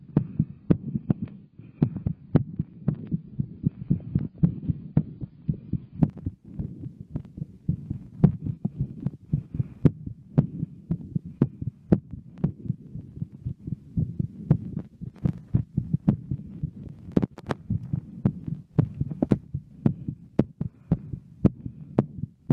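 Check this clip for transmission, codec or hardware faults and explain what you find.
One fault is present: an adaptive stream starting at a low bitrate, from the start to 6.0 s. The player began on a lean version of the stream to start quickly, then switched up once it had gauged the connection. Until 6.0 s the sound is dull and swirly, with nothing above 6.8 kHz, which fits a very low-bitrate AAC tier. A spectrogram shows a flat ceiling at 6.8 kHz that jumps upward at 6.0 s with no gap in the waveform.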